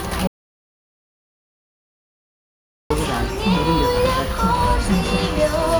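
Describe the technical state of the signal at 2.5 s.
At 2.5 s you're inside an audio dropout to silence running from 0.27 to 2.90 s: dead silence with no room tone, likely an input link that cut out while recording continued.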